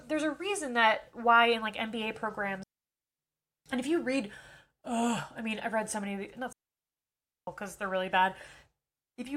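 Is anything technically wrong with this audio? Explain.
Yes. This speech clip has two digital wireless dropouts, from 2.63 to 3.19 s (about 0.56 s) and from 6.53 to 7.47 s (about 0.95 s). The receiver lost too much data from the link and muted, fading out and back within milliseconds. Each one sounds like a clean hole of near silence with no noise burst on either side. On a waveform it's a flat gap, and on a spectrogram it's an empty vertical band with sharp edges.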